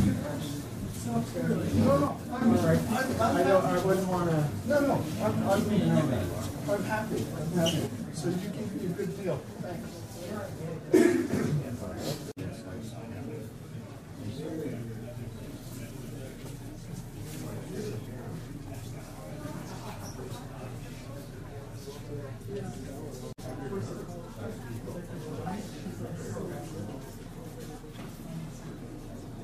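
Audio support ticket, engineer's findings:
Level drops abruptly by about 6 dB at 2.08 to 2.41 s, then again from 7.87 s to the end. Likely one channel drops out before the mono sum, halving shared content.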